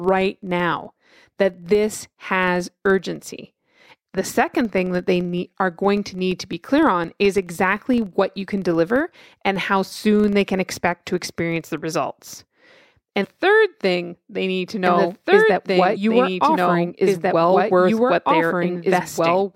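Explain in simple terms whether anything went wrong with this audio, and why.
For the first 11.85 seconds, a low, steady buzz of about 23 ticks per second runs under the speech and grows louder and softer with it. This is a filter restarted on every block. It starts fresh each time and leaves a tiny click at every block edge, which fits 2048-sample blocks.

There are two short glitches, from 13.21 to 13.25 s just before "thing they need to" and from 15.92 to 15.97 s. They come from damaged data in a compressed stream. The decoder hits corrupted bits, loses its place and jumps to the next readable chunk.

From 14.86 s, right after "thing they need to", to the end, a second copy of the speech plays along about two seconds late, just as loud and with no echo-like fading. This is a doubled audio track, likely the same sound captured twice or left duplicated in an edit.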